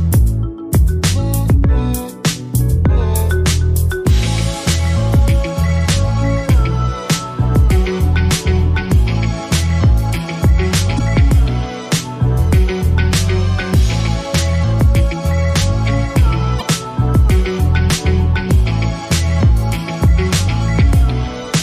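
The audio has two short bursts of damaged data in a compressed stream, at 10.96 to 11.00 s and 16.58 to 16.62 s. Each is brief. Corrupted bytes made the decoder misread frames, lose sync and hunt for the next header.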